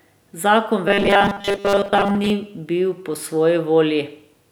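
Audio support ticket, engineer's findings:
Robotic sound from repeated short buffers, 0.88 to 2.3 s. Speech flattens into a stiff metallic buzz at 200 Hz, still loosely tracking the words. Likely starved input, so playback loops a 5 ms chunk through most of that stretch, skipping real audio.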